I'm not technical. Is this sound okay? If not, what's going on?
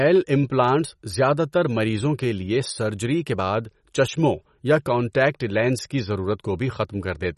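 No. Throughout the speech, the sound has a watery, swirly quality. Nothing above about 11.7 kHz can be heard, so the crisp top end is missing. This is likely MP3 compression, squeezed hard to save space. To fit, the encoder drops the treble and throws away quieter detail. That detail flickers in and out moment to moment, which causes the swirl. The damage is plainly audible for the whole clip.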